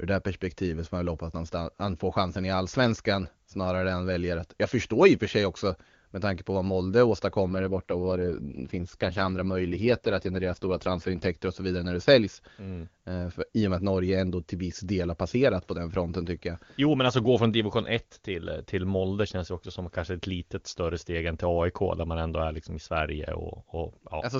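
From 7.46 to 11.29 s there's an AMR rate drop: the link pushes the wideband codec down to what sounds like 8.85 kbit/s, so the speech turns rough and synthetic, then clears again.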